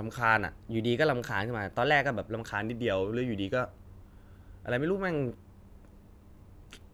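From 0.58 to 2.52 s the speech runs about 6% fast and a semitone sharp, then snaps back, likely a drift correction step between mismatched clocks.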